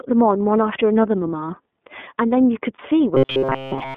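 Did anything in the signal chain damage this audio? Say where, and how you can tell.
Yes. The iLBC codec colours the whole clip. Nothing passes below about 200 Hz or above 3.5 kHz, and the speech has the rough, slightly synthetic grain of a narrowband VoIP coder that codes each frame's excitation on its own. The damage is plainly audible. The frame timing and texture point to iLBC's 30 ms mode, which fits a rate near 13.3 kbps. This is a codec-stage fault, fixed for the entire recording.

Lost iLBC frames appear from 2.76 to 2.80 s, a 30 ms gap that fits a single dropped packet on the network. The decoder filled it by repeating the last pitch cycle with added noise, so the moment sounds like a briefly held, faintly buzzy vowel. Because each iLBC frame decodes independently, the speech snaps back to normal right after, with no smeared recovery.

Robotic sound from repeated short buffers runs from 3.15 s to the end of the clip. 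The speech turns into a rigid metallic buzz fixed at 133 Hz, still loosely tracking the syllables. A 133 Hz drone corresponds to a repeat period of about 7.5 ms. The likely cause is a driver or buffer stage replaying its last short buffer while fresh audio arrives too late, so most of the real signal in that stretch is skipped.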